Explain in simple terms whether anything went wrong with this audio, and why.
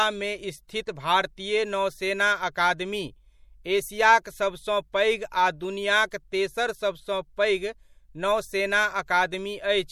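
Yes: across the whole speech recording the sound has a watery, swirly edge, most likely from MP3 compression squeezing it too hard, unlike background hiss, which sits beside the sound.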